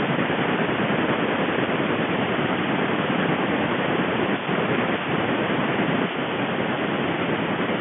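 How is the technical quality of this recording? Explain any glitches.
Nothing here counts as a glitch, really: the speech just has that familiar narrow sound of a fixed-line phone call, with the band running from about 150 Hz up to 3.4 kHz and nothing above roughly 3.7 kHz, which is simply G.711 telephone coding doing its usual job.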